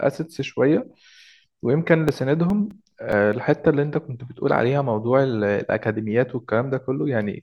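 From 2.08 s to 3.33 s the speech carries CD scratch ticks: seven short clicks at a steady rate of about five a second. A blemish on the disc corrupts more data than error correction can restore on each revolution, so the player patches or mutes those samples, the longest only a few milliseconds. On a spectrogram they appear as thin, evenly spaced vertical lines across all frequencies. On the waveform they show as brief spikes or tiny flattened gaps.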